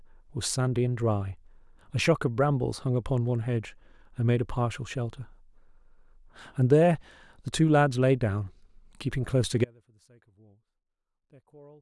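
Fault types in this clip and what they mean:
Audio dropout to a faint residue: at 9.65 s the speech cuts out abruptly and does not return before the end, leaving only a faint sound roughly 30 dB below normal level, likely a signal lost upstream while the path stayed live, unlike a pause or fade.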